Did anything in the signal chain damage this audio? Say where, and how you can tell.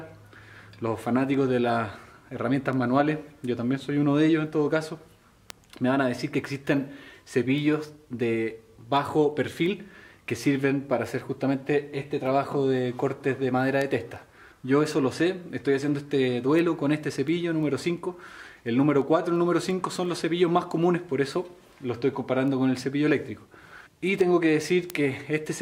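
Yes, word clock ticks at the digital link: sharp ticks roughly every 0.3 s from 0.31 to 25.59 s, an unlocked receiver clock drifting about 70 ppm.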